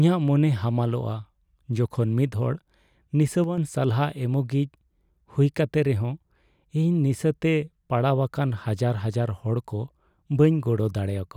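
One channel drops out from 3.44 to 3.58 s, just before "ᱥᱟᱞᱦᱟ ᱮᱢᱚᱜᱤᱡ": the speech abruptly sinks about 6 dB, likely because one stereo side vanished before the mono fold-down.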